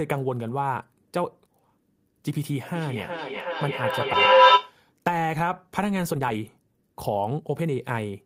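Feedback echo between two devices runs from 2.75 to 4.79 s in this speech recording. Each stretch of speech returns roughly every 400 ms, thinner and more ringing on each pass. Here the repeats build instead of fading, peaking about 11 dB above the speech itself. That points to two devices in the same room on one call, each microphone picking up the other's loudspeaker. Neither echo canceller can remove sound its own device did not play, so the loop keeps circulating. A skip ahead occurs at 4.13 to 4.15 s, while that echo is still sounding. Roughly a second of audio is simply missing, and the two sides are butted together with no fill. Playback lurches forward, and the delay drops by about the same second. This fits a receiver discarding queued audio, in transit or through jitter-buffer overflow, while later material was already waiting. Jitter buffer speed-up follows from 4.95 to 8.05 s. 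The speech plays at about 114% of normal rate with its pitch unchanged, so it sounds rushed. The receiver had more audio queued than it wanted. It trimmed many short pieces of a pitch period or so each, removing around half a second in total to bring the delay back down.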